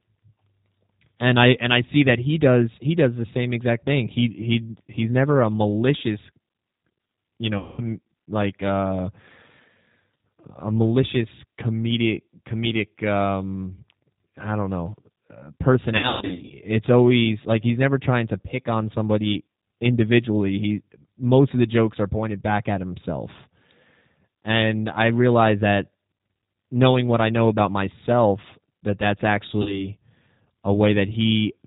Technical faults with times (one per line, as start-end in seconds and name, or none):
0.00-31.66 G.729 codec
7.58-7.82 VoIP packet loss concealed by the speech codec
15.97-16.51 VoIP packet loss concealed by the speech codec
29.62-29.88 VoIP packet loss concealed by the speech codec